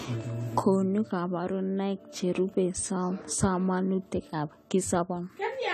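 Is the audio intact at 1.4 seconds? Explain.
No. Lossy coding, likely AAC compression, runs through the whole clip, including 1.4 s. The encoder quantised the spectrum coarsely, which fits a bitrate around 32 kbps, and cut everything above 14.1 kHz, so the speech sounds dull and smeared with a fizzy, warbling edge on sibilants.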